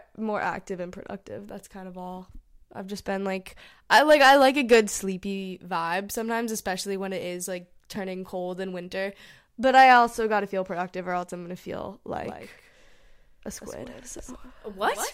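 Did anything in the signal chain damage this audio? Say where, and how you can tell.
Yes. From 12.23 s to the end, the speech acquires a doubled audio track: a second full-band copy trails the original by about 150 ms, roughly 10 dB quieter, and switches on abruptly rather than building up. It is likely a driver or buffer-stage fault, with a slower parallel capture path or a misaligned edit mixing the same signal in twice. Unlike echo or reverberation, the copy occurs once, with no decay tail and no room colouration.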